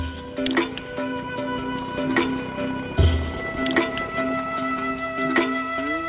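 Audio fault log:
Nothing goes wrong in this one; it just has the narrowband call-line sound you'd expect, with nothing above 4 kHz, which fits a standard phone codec like G.711 A-law at 64 kbps.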